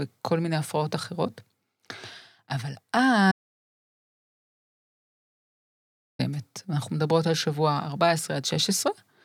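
The audio input likely dropped out for a stretch, through a lost device, failed link or accidental mute, while recording carried on writing silence. In this speech clip, that audio dropout to silence runs from 3.32 s to 6.19 s, removing about 2.88 s. The speech cuts off abruptly mid-flow and returns just as suddenly, and the gap between is dead silence with no room tone, so whatever was said there is lost.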